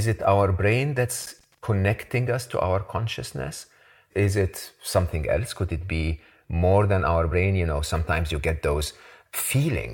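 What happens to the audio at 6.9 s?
Nothing goes wrong at 6.9 s; the speech carries on intact through that moment, with no dropout, click, distortion or other disturbance to be heard.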